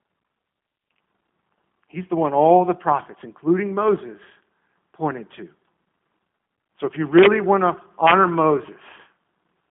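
Throughout, the speech carries plainly audible G.729 codec damage, which fits an 8 kbit/s G.729A coder. Nothing above 3.6 kHz survives, within a 150 Hz to 3.4 kHz line band. Unlike plain telephone filtering, the sound is also rough and synthetic, rebuilt from a modelled vocal tract and sparse pulses.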